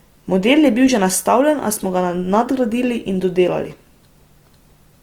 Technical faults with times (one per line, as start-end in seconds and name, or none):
0.00-5.03 Opus compression